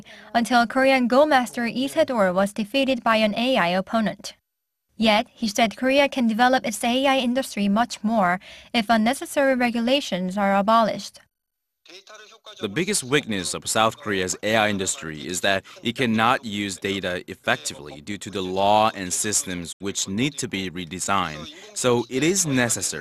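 From the start and across the whole clip there is sample clock jitter: the converter's timing wobbles by a few microseconds, so steep, loud passages pick up a rough hiss roughly 25 dB down. On a spectrogram, faint broadband noise tracks bright, high-frequency energy and disappears in quiet gaps.

At 19.71 s a digital broadcast dropout occurs: the receiver lost valid frames and muted, fading out over 20 ms and staying silent until 19.82 s. The lost 72 ms, which fits about three frames, appears as a flat waveform and a clean vertical gap.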